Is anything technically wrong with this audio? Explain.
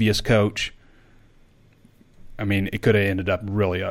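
No, nothing technically wrong.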